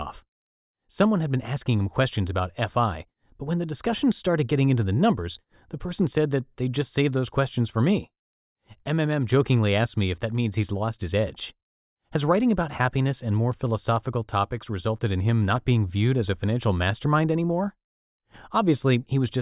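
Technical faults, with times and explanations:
No technical faults can be heard anywhere in this speech.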